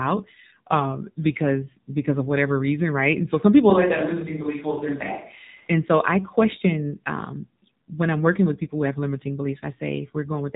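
Speech squeezed through the AMR narrowband mobile codec, start to finish: nothing above 4 kHz survives, and the voice has that buzzy, synthetic edge from the pulse-driven vocal-tract model. The damage is plainly audible, which fits a low mode around 7.4 kbps.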